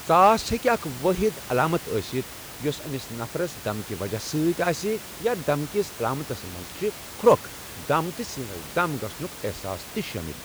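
Nothing stood out on listening to this speech recording, with a background room noise sitting about 15 dB below the speech.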